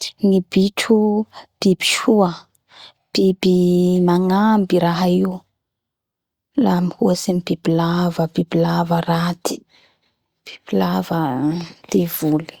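Nothing goes wrong anywhere in this recording.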